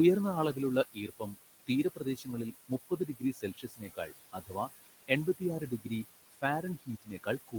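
Noise suppressor artifacts run through the whole clip. The suppressor pulls down what it judges to be steady room noise by about 18 dB frame by frame, so the background, which sits about 12 dB below the speech, sinks in the gaps and returns under the voice. Unlike plain room noise, its level pumps with the speech.

Speech cut by the noise suppressor occurs from 0.93 to 4.69 s, with about a second and a half of speech affected in all, and again from 5.07 to 7.58 s. In both stretches, quiet consonants and word endings are mistaken for noise and dropped by up to about 20 dB, so they sound swallowed. A dropout would remove everything at once. Here only the soft parts fade while louder syllables stay intact.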